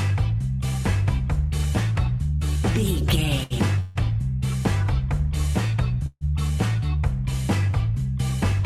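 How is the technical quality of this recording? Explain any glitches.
Four brief timing glitches interrupt the audio, all of them holds where the sound stretches rather than drops out.

Short stall from a late packet, at 3.43 to 3.53 s and 7.71 to 7.76 s: the sound hangs for 68 ms and then 22 ms, with a slight buzz or dip. A packet arrived late, so the receiver stretched the last bit of audio until it came, then continued without losing anything.

Call audio freeze, at 3.80 to 3.98 s and 6.06 to 6.24 s: about 150 ms of sustained buzz or hiss that fades, the second one going fully silent for 40 ms. Delayed packets likely emptied the jitter buffer, and the receiver filled the wait before resuming where it stopped.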